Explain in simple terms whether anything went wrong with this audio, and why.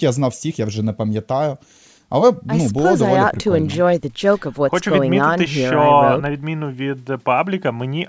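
No, nothing went wrong here.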